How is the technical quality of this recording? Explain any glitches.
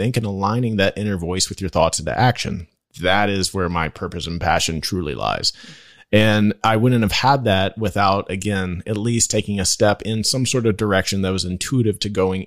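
No glitches or technical faults can be heard anywhere here.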